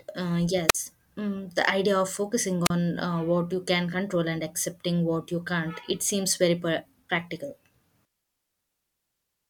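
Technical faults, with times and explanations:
0.68–0.75 s and 2.65–2.70 s, wireless microphone squelch dropout: the radio link fades, hiss briefly rises, then the receiver's squelch mutes the output for about 46 ms and 35 ms. On a spectrogram, a short broadband smear precedes a blank vertical gap; the waveform flatlines.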